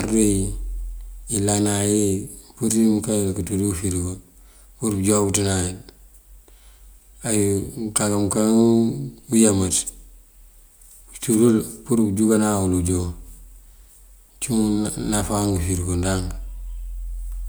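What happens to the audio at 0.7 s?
Nothing goes wrong at 0.7 s; the speech there is intact, with no dropout, click or other fault.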